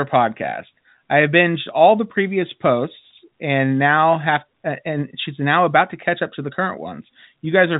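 Nothing stood out on listening to this speech clip, which carries the narrow telephone band of G.711 coding with nothing above about 3.8 kHz.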